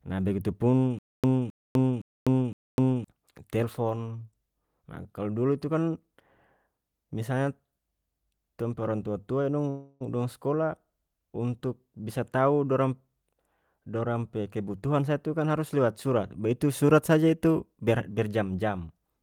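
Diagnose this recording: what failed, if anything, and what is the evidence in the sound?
From 0.99 to 3.04 s the clip has a stutter with silent gaps, in the playback or streaming buffer stage. A 0.26 s fragment plays, then about 0.25 s of digital silence, repeating every 0.51 s, four times. This is most likely a stalled player or stream replaying its last fragment on each retry before running dry. The waveform shows identical blocks separated by flat silent stretches, and the spectrogram shows copied slices with blank columns between them. The audio that should have filled this span is lost.

From 9.69 to 10.02 s there is a call audio freeze, in the network and call jitter buffer stage, just before "dong skolah untuk bisa". For 0.31 s the last sound is held as a fading buzz or hiss instead of continuing. Delayed packets likely drained the jitter buffer, and the receiver stretched what it had until they arrived. 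On a spectrogram this appears as smeared horizontal bands with no new onsets, and on the waveform as a repetitive, unchanging stretch. Nothing is missing. The later audio simply starts 0.31 s late.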